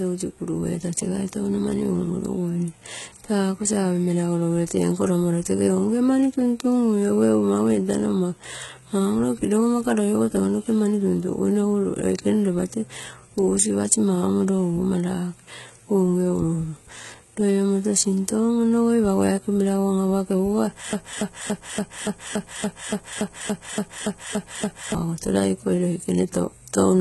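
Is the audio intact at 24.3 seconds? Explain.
No. At 24.3 s you're inside a broken-record loop that runs from about 20.93 s to 24.95 s. A fragment of roughly 285 ms repeats exactly, back to back, 14 times, so you get a stuttering, stuck-groove sound. The likely cause is a stalled player, encoder or stream that kept sending the last chunk it held. Whatever speech should have played in those four seconds is simply gone.

On top of that, the whole clip carries heavy damage that likely comes from HE-AAC compression, and it's present at 24.3 s too. Nothing survives above 11.8 kHz. The treble up to that point isn't the original; it's rebuilt by copying lower bands upward under a coarse envelope. Harmonics don't line up across the crossover, so s sounds come out gritty, metallic or lispy. The damage fits a low bitrate, around 16 kbps.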